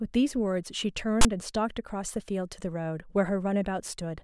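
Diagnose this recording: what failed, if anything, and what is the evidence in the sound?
At 1.21 to 1.25 s the speech is cut by a 35 ms burst of harsh, loud rasp with abrupt edges: file tags played as audio. The failure is at storage or playback, where the decoder read a block of text tags as sample data. Text bytes cluster in a narrow value range, so the waveform shows a dense block pushed off to one side of zero, and the spectrogram shows a hard-edged broadband vertical stripe.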